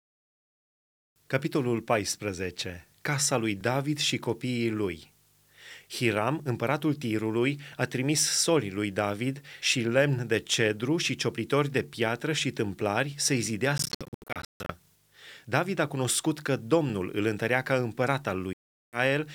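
Speech, with two stretches of Bluetooth dropout, likely caused by audio packets reaching the headphones too late and being discarded. From 13.78 to 14.72 s the sound breaks up into several silent holes totalling about 0.56 s, the longest about 0.15 s. A second break from 18.53 to 18.99 s removes about 0.40 s. Each time the speech resumes further along, as if it had kept playing. A spectrogram shows blank vertical columns with sharp edges, and the waveform drops straight to flat silence.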